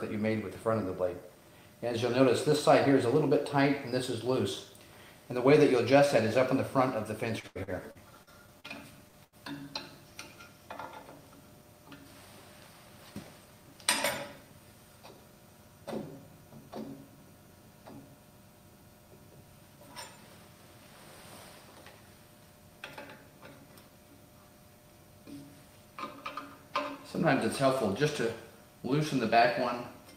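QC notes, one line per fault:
7.39–8.67 s, repeated packet loss (robotic sound): seven separate dropouts fall within this 1.3 s stretch, the longest 81 ms. Each one is bridged by stretching the preceding sound, about 285 ms of patched audio in all, or 22% of the span, while about 200 ms of real content never arrives. The rapid alternation of genuine and synthesized fragments gives the choppy texture, with pieces audibly missing.
9.08 s and 9.24–9.35 s, burst of packet loss: two short losses follow closely after the robotic stretch. At 9.08 s about 45 ms is filled in and 40 ms of content is lost. At 9.24 s about 78 ms is filled in and 40 ms is lost, and the playback delay shifts by 38 ms as the receiver readjusts. In both, the last sound is held and faded, leaving a brief buzz or hiss before the audio picks up further along with that material gone.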